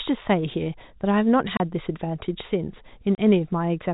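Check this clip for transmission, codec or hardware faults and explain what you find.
There's one kind of fault here, packet loss filled with silence, and it hits twice in this speech clip. At 1.57 to 1.60 s and again at 3.15 to 3.18 s, the sound drops out for 30 ms. Each gap fits three 10 ms packets going missing, with the receiver playing plain silence in their place instead of concealing the loss. The cuts have hard edges going in and out of each hole. Underneath, the narrowband telephone coding sounds as it should, with nothing above 4 kHz.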